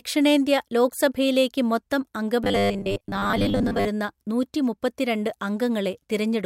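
Speech, where from 2.44 to 3.88 s audio likely arrived too slowly and about half was lost to looped 10 ms buffers, giving robotic sound from repeated short buffers: a rigid, metallic 100 Hz buzz.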